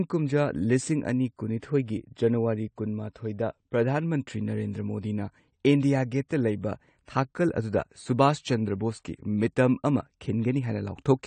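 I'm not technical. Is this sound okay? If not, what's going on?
No. The whole recording sounds dull and smeared. Nothing above about 9 kHz comes through, so the crisp top end of the speech is missing. The damage is plainly audible throughout. This points to AAC compression as the likely cause, a way of shrinking audio files. It throws away detail it judges you won't miss. Squeezed this hard, it removes too much, and the sound loses its clarity and sparkle.

There is also a brief pre-echo from 6.28 to 6.31 s. Just before a sharp sound, a short hiss appears, lasting about 21 milliseconds. It happens because the compression handles audio in small blocks. The noise it creates for the loud moment spills into the quiet moment before it. So the hiss arrives early, and the sharp sound itself comes out softened.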